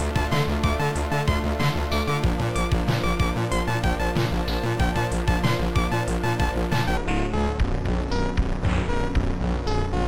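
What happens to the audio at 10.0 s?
At 10.0 s the audio is inside a section at the wrong speed, running from 6.97 s to the end at 10.08 s. It plays at 0.617 times its recorded speed, likely from playback on a mismatched clock, so it sounds slow and about seven semitones deeper. Because tempo and pitch fall together, it is not a pitch shift or a time stretch.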